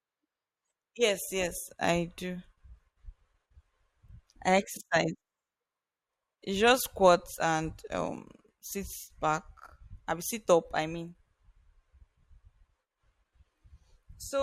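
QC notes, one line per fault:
7.19 to 7.22 s, compressed frames skipped: just before "and um sits back" the audio jumps forward by about one 20 ms frame, because that frame was missing or rejected by the decoder as damaged. On a spectrogram a harmonic track breaks at the join. The waveform shows a discontinuity at the join.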